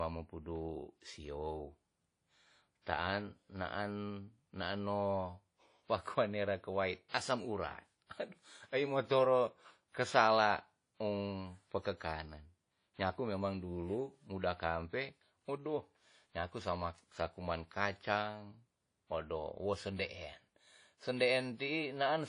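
Throughout, the speech carries plainly audible WMA compression, likely from a low-bitrate encoder around 32 kbps: nothing above 10.1 kHz, with ringing, washy hiss tracking the signal. From 7.09 to 7.14 s, pre-echo appears: quantisation noise from a sharp attack spreads about 55 ms backwards, leaving a brief hiss before a softened onset.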